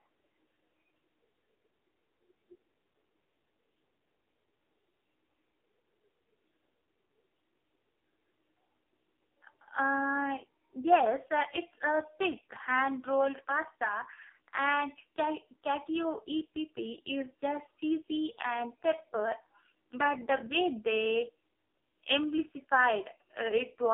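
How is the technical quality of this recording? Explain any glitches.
Poor: one fault runs through the whole recording. Throughout, the speech sounds thin, buzzy and synthetic, with nothing above 3.6 kHz. This is heavy AMR narrowband mobile codec damage, consistent with about 5.15 kbps, rebuilding the voice from sparse pulses.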